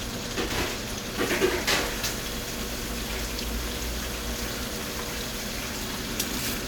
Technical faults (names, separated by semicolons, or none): none